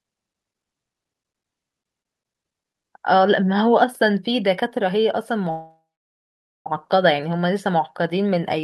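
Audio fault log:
5.50–6.67 s, call audio freeze: the sound stalls for about 1.15 s, the last fragment trailing off and fading before roughly 0.86 s of silence, then resumes exactly where it stopped. Unlike packet loss, nothing is skipped; a gap is inserted and everything after arrives about 1.15 s later. This likely comes from delayed packets draining the jitter buffer, with the receiver stretching the last sound until data returned.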